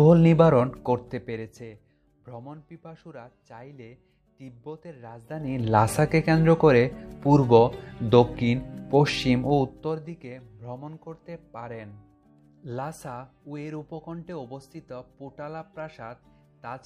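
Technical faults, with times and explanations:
0.65–1.97 s, 5.22–5.67 s and 9.36–10.15 s, zipper noise: a rapid ticking, around 40 clicks a second, rides on the sound as the level falls about 25 dB, rises about 25 dB, then falls about 20 dB, because each move happens in unsmoothed steps.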